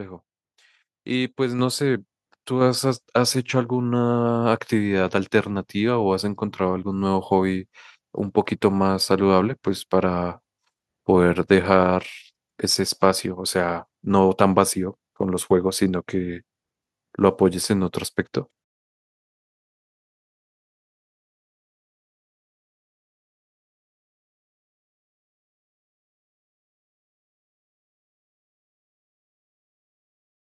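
At 1.59 s and again at 2.61 s the microphone volume is stepped up: the input gain on the device is raised in a single jump, by about 5 dB and then about 4 dB. Voice and background noise both become louder at the same instant. On a waveform the envelope shows two abrupt, sustained rises. On a spectrogram every frequency band brightens together at each step, including the noise floor between phrases.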